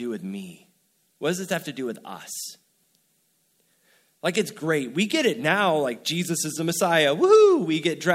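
No technical faults can be heard anywhere in this speech recording. From the first moment to the last, the sound carries on without any interruption or disturbance.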